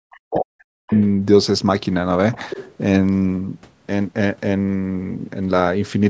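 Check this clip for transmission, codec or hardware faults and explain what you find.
Two faults stand out, both typical of a hands-free call where the two sides overlap.

Speech suppressed in double talk, from 0.02 to 0.93 s: the talker's level sinks sharply, at its deepest by roughly 40 dB, so the sound fades for almost the first second. The likely cause is the echo canceller hearing both parties at once, failing to tell the local talker from the loudspeaker echo, and attenuating everything on the microphone path until the overlap passes.

The other side's voice leaking through, at 0.92 to 1.01 s and again at 2.33 to 2.75 s: a second, fainter voice slips in underneath, the first a brief scrap about 25 dB below the talker, the second a longer stretch only about 15 dB down. This is likely residual loudspeaker echo that the echo canceller left in the microphone signal. The call's microphone processing, with nothing above 8 kHz, is present throughout.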